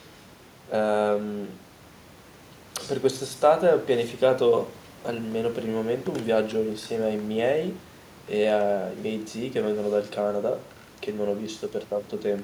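The speech signal shows no technical faults, with only the room's own background noise present at about 27 dB below the speech.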